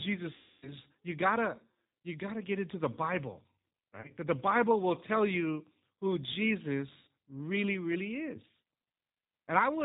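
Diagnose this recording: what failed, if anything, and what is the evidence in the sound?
The call path ran through a G.729 codec, and its coding damage is plainly audible across the whole clip. The speech is band-limited with nothing above 4 kHz, and it has the rough, slightly synthetic texture of a model that rebuilds each 10 ms frame from a vocal-tract filter, a pitch predictor and a handful of pulses. The sound points to the 8 kbit/s G.729A variant.

On the network side, packets were dropped and the decoder filled the gaps with VoIP packet loss concealment. It repeated its last pitch and filter state at falling gain, so the speech smears into a buzzy tone or coloured noise that fades at 0.36–0.73 s, 4.01–4.10 s and 7.02–7.08 s. The first gap is long, about 260 ms, which fits a run of 26 lost frames. The other two are about 30 ms and 50 ms. After each gap the voice comes back weakened for a moment while the predictor state rebuilds.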